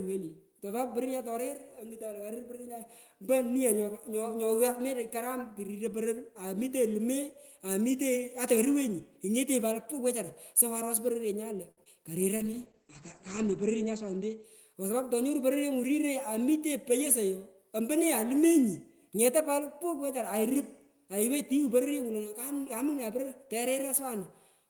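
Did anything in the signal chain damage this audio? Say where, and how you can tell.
Yes. At the network and jitter-buffer stage, a packet arrived late at 11.71 s and the buffer ran dry. The receiver held the last speech sound for about 60 ms until 11.79 s, then resumed where it stopped. Nothing is lost, but that sound drags with a slight buzz or dip.

Right after, at 11.83 to 11.88 s, there is short concealed packet loss. About 40 ms of audio never arrived in time. The decoder filled only 22 ms by extending the preceding sound and then blended back, so there is a brief smear or wobble and a short consonant may vanish.

In the codec, a call bitrate drop runs from 12.38 to 14.64 s. The bandwidth estimate fell and the encoder went from 32 to 11 kbps, staying at the lowest rate for about 1.2 s. The audio band shrank from 20 kHz to 8 kHz, so the speech turns muffled and coarse.

Back in the jitter buffer, a speed-up runs from 14.73 to 15.38 s. 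Too much audio had queued, so the receiver cut out pitch-period slices, roughly 70 ms in total. The speech plays at about 109% speed with unchanged pitch and sounds hurried.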